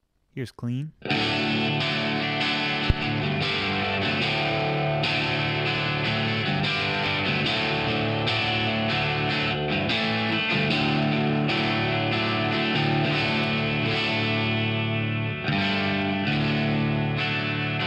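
Right around 1.67 s there's a very brief disturbance, only about 14 ms long, that comes from damaged data in the compressed stream. A small stretch of the encoded file was corrupted, so the decoder couldn't read those frames properly, lost its place, and had to hunt for the next valid frame header before picking the audio back up. What you get is a quick glitch, the kind that comes across as a click, chirp or tiny gap.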